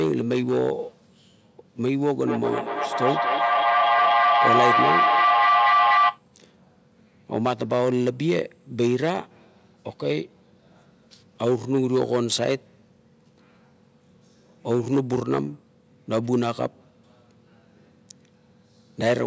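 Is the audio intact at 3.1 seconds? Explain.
No. At 3.1 s the clip is inside a feedback howl lasting from 2.27 to 6.25 s. A loop between two devices on the same call gains level on each pass, so a tone near 1 kHz swells, repeating about every fifth of a second, to about 4 dB above the speech. Unlike echo, the repeats grow instead of fading.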